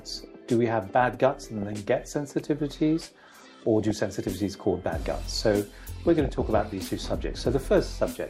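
DAB burbling appears at 1.34–1.73 s, 3.81–3.97 s and 6.10–6.73 s. Residual bit errors, roughly 0.4 to 0.7 percent, corrupt MP2 samples and scale factors, so short blips of noise appear in single sub-bands and individual sub-bands jump in level for up to a frame over the sound.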